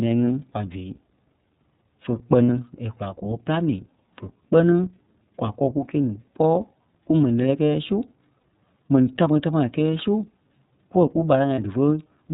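Throughout, the speech sounds band-limited, slightly rough and synthetic, with nothing above 4 kHz and plainly audible coding damage. This is the iLBC codec, which codes each frame's excitation independently and fits its 13.33 kbps mode with 30 ms frames.

At 2.44 s a buzzy, held vowel-like sound replaces about 60 ms, which fits two lost 30 ms frames. Similar 30 ms fills occur at 8.39 s, just after "kumɛni lɛ́lɛɛ kɛ́ɛ su", and at 11.55 s. These are lost iLBC frames: the decoder repeats the last pitch cycle mixed with noise, and since frames stand alone, the speech recovers almost at once.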